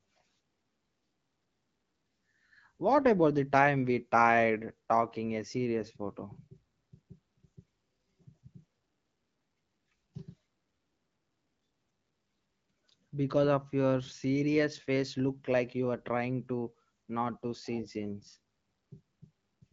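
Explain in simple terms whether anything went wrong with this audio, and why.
Nothing went wrong here: the speech sounds just as you'd expect from an HD Voice phone call, with the wideband phone codec doing its ordinary job and no fault to point to.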